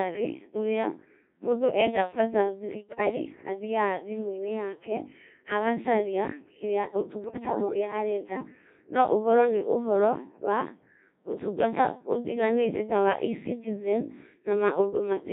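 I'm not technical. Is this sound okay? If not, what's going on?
No. The speech went through a Codec 2 vocoder, a very low-rate digital radio system that sends only a rough outline of the voice and rebuilds it from simple tones. Throughout the clip, the speech sounds robotic and buzzy, heavily damaged.

There are also two bursts of bit errors on digital voice radio, where corrupted data, roughly one bit in ten, reached that decoder. From 2.81 to 3.16 s, just after "ũrĩa mũndũ enda bata", and from 7.24 to 7.74 s, after "yake agacaria kĩrĩa", the voice jumps in pitch and loudness and breaks into warbling gibberish.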